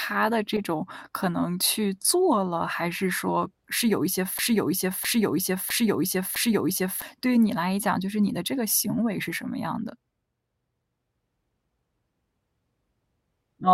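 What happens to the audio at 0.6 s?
A corrupt frame decoded hits the speech from 0.56 to 0.61 s, about 44 ms that fits a couple of damaged compressed frames. Flipped bits made the decoder misread gains or spectral codes, so it rebuilt that stretch with energy in the wrong places, heard as a brief artificial chirp, blip or burst of noise. On a spectrogram it shows as a short block of energy out of line with the neighbouring speech harmonics. On the waveform it appears as a sudden, misshapen stretch.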